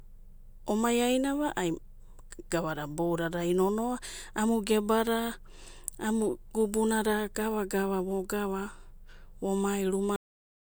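At 10.16 s the speech hits a cut-off end: the final stretch of audio was never written out, so the sound stops mid-utterance and falls straight to digital silence. The waveform ends abruptly without any decay, and the spectrogram shows a hard vertical edge followed by blankness.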